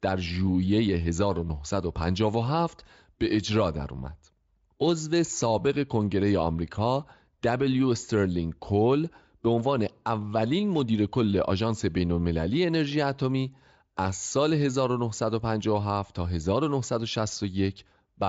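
Nothing stood out on listening to this speech recording, which comes through the Speex codec.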